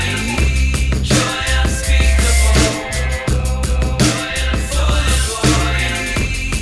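Nothing stood out as a technical fault anywhere in the recording when I listened to it.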